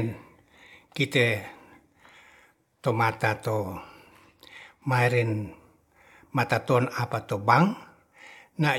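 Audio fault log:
No fault to log.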